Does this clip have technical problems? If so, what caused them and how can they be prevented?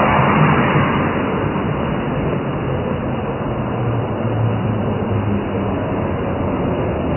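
Yes. The likely cause is MP3 compression at a very low bitrate, consistent with around 16 kbps. Starved of bits, the encoder removed everything above 3 kHz and dropped weak frequency lines frame to frame, so the entire clip sounds dull, watery and swirly, with smeared attacks. Encoding at a higher bitrate, or using a lossless format, would prevent this.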